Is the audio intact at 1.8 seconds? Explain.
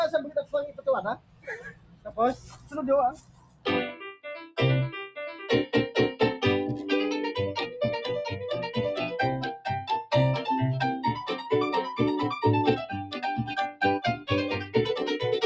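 No. At 1.8 s the audio sits inside a stretch of sound cut by the noise suppressor, running from 1.14 to 2.18 s. The suppressor treats the steady, sustained parts of this passage as background noise and pulls them down, reaching its deepest drop of about 20 dB. Held material sinks and fades early while sharper onsets still get through, so for about a second the sound is hollow and lower in level than what surrounds it.

That dip is the sharpest instance of a broader fault: a noise suppressor applied to music or sounds, active for the whole clip. Built for speech, it keeps reading sustained tones, ambience and decays as noise and attenuating them, with its gain swinging by roughly 15 dB. At 1.8 s this shows up as held sounds sinking or their decay being cut short.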